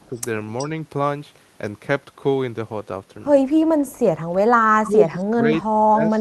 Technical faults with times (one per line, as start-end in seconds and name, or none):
0.09-0.17 speech suppressed in double talk
0.16-0.20 echo leak
0.58-0.67 echo leak
4.73-6.21 speech suppressed in double talk